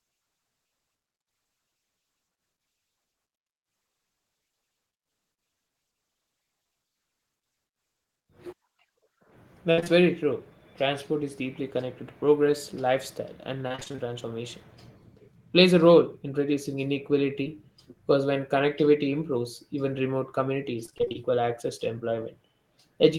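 At 9.71 to 9.79 s, just before "very true", a burst of packet loss removes about 60 ms of speech. The receiver stretches the last sound and fades it, so a brief held buzz or fading hiss replaces real speech. On a spectrogram, a frozen spectrum fades out over that span.

Two short concealed packet losses follow at 9.79 to 9.84 s and 9.84 to 9.88 s, and another occurs at 17.44 to 17.47 s. Each fills roughly 15 to 24 ms with continued pitch or shaped noise, heard as a quick smear or wobble. The waveform shows small, oddly smooth patches.

Repeated packet loss (robotic sound) runs from 13.68 to 14.00 s, right after "to progress lifestyle and", and again from 20.85 to 21.16 s. Short holes of up to about 28 ms cover roughly half of each stretch, making the speech choppy. The spectrogram shows striped, repeating blocks.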